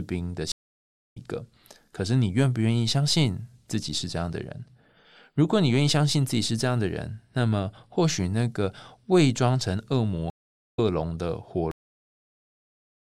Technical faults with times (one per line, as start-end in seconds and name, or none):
0.52-1.17 stream reconnect
10.30-10.79 stream reconnect
11.71-13.15 cut-off end